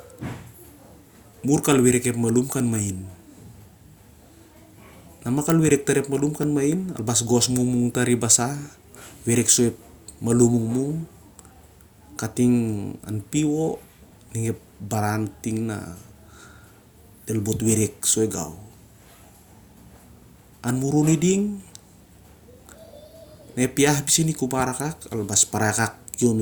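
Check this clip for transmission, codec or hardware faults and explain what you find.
Nothing stands out here: the speech comes across steady and intact throughout, with no faults in transmission, coding or hardware to point to.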